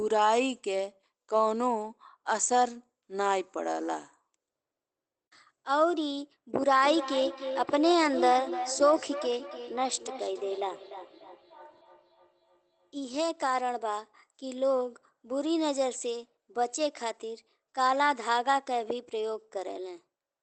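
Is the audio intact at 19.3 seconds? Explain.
No. At 19.3 seconds the speech is still inside a section at the wrong speed that runs from 4.54 s to the end of the clip. It plays 1.12 times too fast, likely because it was resampled against the wrong clock, so pitch rises by about two semitones and delivery sounds hurried. On a spectrogram the harmonic lines and formants sit proportionally higher, below the 8 kHz ceiling of the Opus call path, and waveform syllables look compressed in time.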